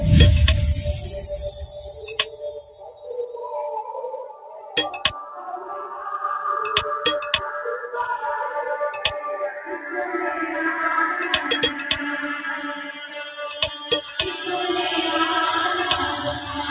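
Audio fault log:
throughout, noise suppressor applied to music or sounds: the level pumps and flutters by around 10 dB, and held sounds and tails thin out. A suppressor tuned for speech treats steady tones and ambience as noise.
4.15–4.76 s, 5.19–5.70 s, 9.52–9.89 s, 12.63–13.42 s, 13.70–13.88 s, sound cut by the noise suppressor: sustained or fading sound sinks, by about 12, 8, 8, 9 and 6 dB respectively, because the suppressor judged it to be noise.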